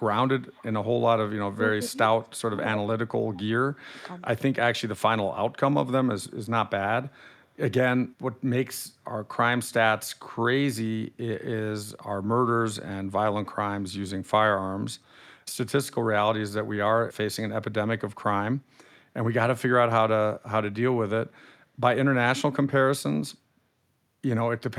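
At 0.50 to 0.63 s a faint delayed copy of the speech sits behind the talker, trailing by 278 ms at about 30 dB below the direct sound. This is an echo leak, likely from a far end playing the call on a loudspeaker whose echo canceller let part of the microphone pickup return down the line. The same 278 ms copy recurs at 2.23 to 2.39 s, weaker at about 40 dB down.

Between 1.54 and 3.55 s the talker's level repeatedly collapses in short pieces, the signature of speech suppressed in double talk. The dips fall at 1.54 to 1.60 s (roughly 20 dB), 1.91 to 1.98 s (roughly 15 dB), 2.49 to 2.59 s (roughly 20 dB), 2.83 to 3.13 s (roughly 25 dB) and 3.30 to 3.55 s (roughly 25 dB). The likely cause is an echo canceller that could not separate the local talker from loudspeaker echo while both sides spoke, so it attenuated everything.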